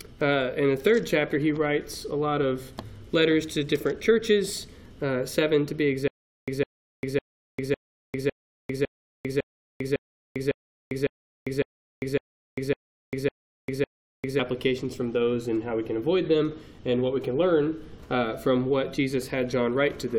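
Stutter with silent gaps from 6.08 to 14.39 s: a 156 ms burst repeats 15 times, each followed by 398 ms of digital silence, likely a stalled stream retrying.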